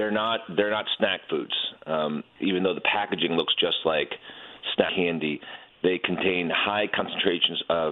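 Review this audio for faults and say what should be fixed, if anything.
Damaged data in the compressed stream causes brief glitches at 1.42–1.44 s, 4.88 s and 6.99 s. Corrupted frames make the decoder lose sync. Prevent this by checksumming transfers and keeping stream metadata out of the audio data.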